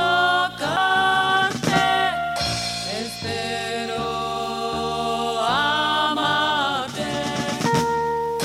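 At 0.76 s there's a CD skip: the laser jumped off its track and landed on another turn of the spiral. You hear a brief tick as the player mutes for just a few milliseconds, then the sound picks up from a different spot.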